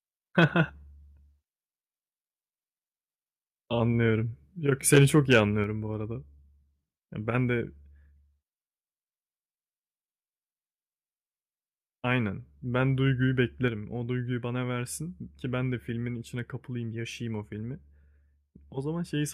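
At 0.38 to 0.45 s and again at 4.93 to 5.38 s the loudest speech peaks turn harsh and crackly, pushing roughly 3 dB and 4 dB past the converter's limit, with a few percent of samples flattened. This is microphone overload, likely from the input gain being set too high.

At 5.64 s and 13.68 s the speech and background both drop by about 4 dB in a single step. This fits the microphone volume being stepped down, likely by the call software reacting to the microphone being too loud or clipping.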